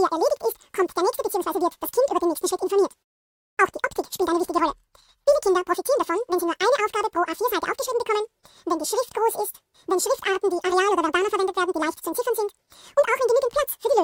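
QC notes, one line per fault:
throughout: audio read two samples at a time (double speed), so it plays at exactly twice speed and one octave up.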